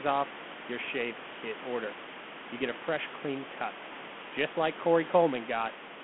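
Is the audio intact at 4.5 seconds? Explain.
Yes, the audio is intact at 4.5 seconds, with no fault at that moment.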